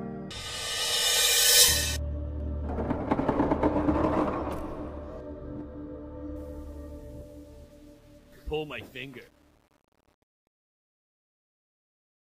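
The fade-out at the end carries truncation distortion on a fade. From 6.36 s the tail turns gritty, and from 7.28 s to the end at 12.2 s it's at its worst and grainy. The fade stage is chopping the level to too few bits with no dither, which fits a 10-bit path, so the quiet waveform collapses into coarse square steps.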